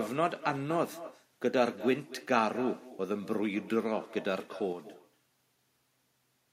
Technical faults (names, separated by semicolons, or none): echo with no canceller; sudden gain jump